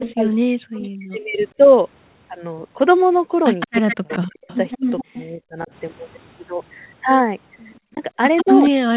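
Speech on a call, with two echo-canceller problems tangled together. Echo leak shows up as a copy of the voice trailing by 163 ms at 0.04–0.12 s, 0.74–0.89 s, 3.6–5.25 s and 7.74–8.7 s, sitting about 10 to 20 dB under the speech, most likely a loudspeaker echo the canceller didn't fully remove. Around those same stretches, 0.0–1.39 s, 3.82–5.7 s and 7.93 s to the end, you get speech suppressed in double talk. The voice ducks by something like 40 dB, likely because the canceller couldn't tell the talker from the echo and turned both down.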